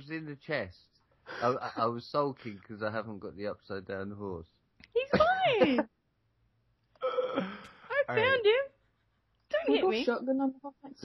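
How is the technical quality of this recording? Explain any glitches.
Nothing here stands out as a glitch, so there's no fault to walk through in this recording.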